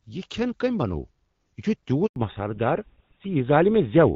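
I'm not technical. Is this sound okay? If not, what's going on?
No. At 2.06 s the voice cuts out for a tenth of a second, until 2.16 s. That's a handover gap: the phone was switching networks and nothing got through.

From 2.16 s to the end the voice turns duller and flatter. This is a fallback to narrowband: the call left HD Voice for an older system that drops everything above 4 kHz.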